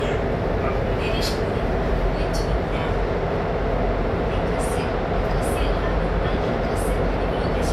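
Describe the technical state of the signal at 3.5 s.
At 3.5 s the sound carries generation loss, present across the whole clip. It has a swirly, hollow, smeared quality, and attacks blur. This likely comes from repeated MP3 encoding, about four passes at something like 128 kbit/s, each adding fresh quantisation noise on a shifted frame grid.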